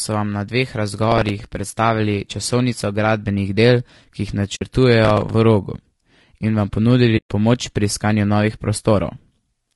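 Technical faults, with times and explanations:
Throughout: low-delay AAC compression. The speech sounds rough and grainy, with noise filling the gaps between harmonics and a thin, synthetic-sounding top end. That's likely the low-delay AAC used in video calls, whose short frames handle pitch badly at a low bitrate around 32 kbps.
1.12–1.63 s and 5.05–5.34 s: processor overload crackle. Two bursts of gritty, tearing crackle sit on top of the speech. The processor kept missing its deadlines on tiny buffers, each around 5 ms, and filled every miss with a hard-edged scrap of old audio, roughly ten and fifteen times in a row.
4.55–4.62 s and 7.17–7.28 s: AAC frame loss with muting. The sound fades out and back in, leaving soft-edged holes. Frames went missing and the decoder zeroed them, about 60 ms the first time and 120 ms the second, while the overlapping windows smoothed the edges.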